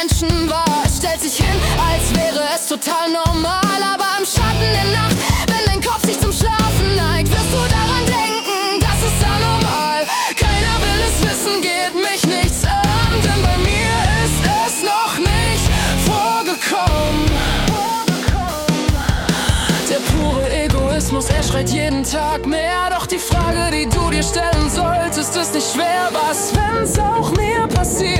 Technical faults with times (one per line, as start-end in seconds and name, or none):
8.89-28.19 wrong sample rate